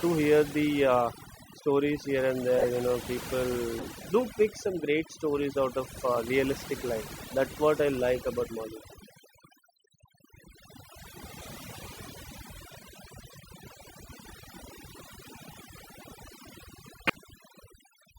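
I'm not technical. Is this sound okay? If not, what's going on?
No, it has two problems.

First, there's overdone noise removal running through the whole clip. A noise-cleaning tool was pushed too hard, so it keeps switching off slices of the sound it mistakes for background hiss, and the softer parts of the speech get swallowed along with it. That's why the pauses go almost dead quiet with little twinkly specks in them.

Second, there are short glitches from a corrupt frame decoded. The audio was stored in small compressed chunks, and some chunks got scrambled but were played anyway, so sound lands where it shouldn't and you hear a quick chirp, squeak or burst. They happen at 2.58–2.66, 3.79–3.88, 5.97–6.00, 7.07–7.10, 11.41–11.46, 15.50–15.54 and 17.07–17.16 seconds. The ones at 2.58 and 17.07 are the loudest and easiest to spot. The others are fainter blips.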